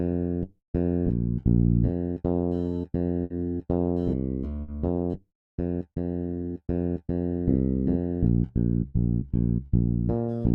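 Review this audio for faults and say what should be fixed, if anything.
Four bursts of packet loss occur, at 3.24, 4.62, 8.88 and 9.66 s. At each, packets were lost or arrived too late to play, and the receiver filled a 60 ms gap by extending the last sound while fading it down. When playback resumes, 60 ms of the original audio is gone, so the sound jumps ahead slightly. To prevent this, use a larger jitter buffer and forward error correction, or carry the audio over a more reliable network path.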